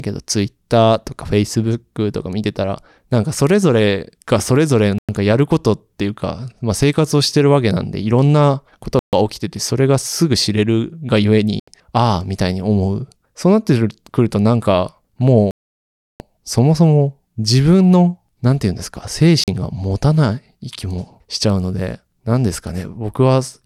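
Speech with five Bluetooth stalls, where the sound drops to full silence and then resumes where it stopped or slightly later, at 4.98, 8.99, 11.60, 15.51 (the longest, about 0.69 s) and 19.44 s. The likely cause is radio interference draining the headphones' buffer.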